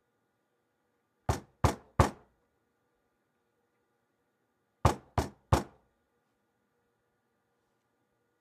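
No technical faults are audible.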